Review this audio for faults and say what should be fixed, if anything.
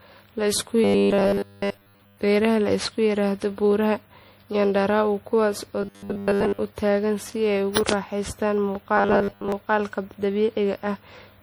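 The speech was likely decoded and re-encoded around seven times through MP3 at 64 kbit/s. Each pass quantised again on a shifted frame grid, so noise and spectral gaps stacked up. The result, generation loss, runs through the whole clip: the speech sounds swirly, hollow and smeared, worse than a single 64 kbit/s encode would, and consonant onsets are softened. To prevent it, keep an uncompressed master and encode to MP3 only once, at the end.

Playback likely received new audio too rarely, and the software covered the gaps by looping the most recent short buffer while most of the real audio was skipped. This gives robotic sound from repeated short buffers: a rigid, metallic 100 Hz buzz that follows the speech only loosely. The 100 Hz rate fits a buffer of about 10 ms. It occurs at 0.84–2.17 s, at 5.83–6.60 s (ending just before "u tagaan"), and at 8.97–9.52 s. Larger jitter buffers and steadier audio delivery would keep the buffer from running dry.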